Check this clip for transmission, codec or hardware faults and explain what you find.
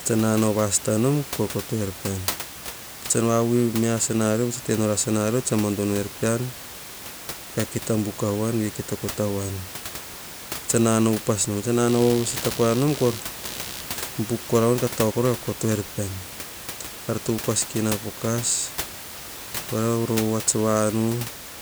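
One hardware fault is audible, computer activity noise, from 11.88 s to 16.26 s. A buzzing, chirping scratch sits under the speech, pulsing at around 70 Hz and roughly 20 dB below it. It follows the computer's load, not the speech. Changing processor or graphics load shifts the shared ground, and the audio circuit picks this up. The steady room noise, about 13 dB below the speech, is separate.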